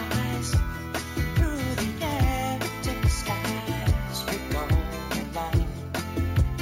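From start to finish there is imaging from sample-and-hold upsampling. Each sample was held and repeated to reach a higher rate, with no smoothing filter afterward. This points to 16 kHz material raised to 48 kHz. Mirrored copies of the spectrum land above the original band, the first spanning 8 kHz to 16 kHz at about 20 dB below the signal. It sounds like a bright metallic fizz that tracks the level of the sound. A spectrogram shows that mirrored band folded upward, and the waveform looks stair-stepped.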